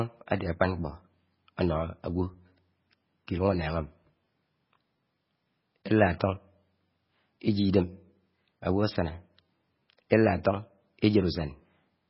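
From start to finish the speech carries heavy MP3 compression damage. Nothing survives above 5.6 kHz, and the remaining band has a watery, swirling quality as weak frequency components blink on and off between frames. Sibilants turn metallic and consonant attacks smear. The likely cause is an encoder starved of bits, which fits a very low bitrate around 16 kbps. A plain low-pass filter would dull the treble just as sharply but leave no warble behind.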